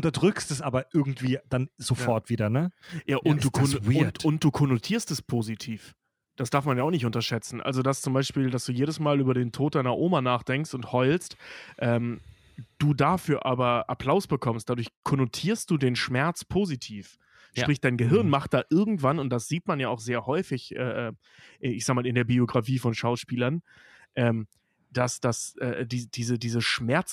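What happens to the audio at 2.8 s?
From 2.03 to 7.33 s, after "es aber irgendwie dann", sample clock jitter mistimes samples, adding hiss that swells with loud, bright speech and vanishes in pauses, unlike constant noise.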